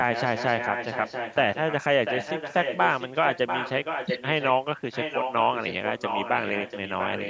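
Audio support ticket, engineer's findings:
Echo leak, 0.04–1.37 s, 1.54–1.82 s, 2.05–4.54 s, 4.91–7.29 s. Delayed copy of the speech trailing by 691 ms, around 10 dB down early, louder (about 5 dB down) from 2.05 s. Likely far-end loudspeaker pickup that the echo canceller failed to remove and sent back.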